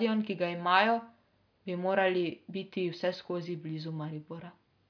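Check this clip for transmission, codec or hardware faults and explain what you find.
Nothing to report: no transmission, codec or hardware fault is audible anywhere in the speech.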